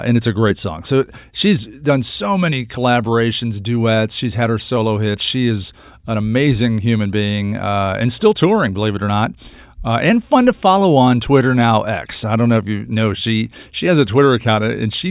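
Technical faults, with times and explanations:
No technical faults can be heard anywhere in the speech. There is nothing here that needs a time or an explanation.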